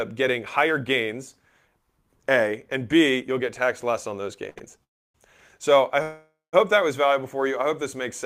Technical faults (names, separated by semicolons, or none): sample clock jitter; short stall from a late packet; call audio freeze